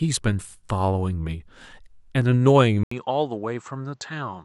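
At 2.83 s the speech cuts out for a brief 80 ms gap, then resumes sounding duller and boxier through to the end at 4.44 s. Nothing above 8 kHz remains, so the airy top end is gone, the level drops by roughly 5 dB, and a new, faint background noise floor appears well below the speech. The cause is likely an input switched to a poorer device, a narrower-band microphone with its own tone and noise.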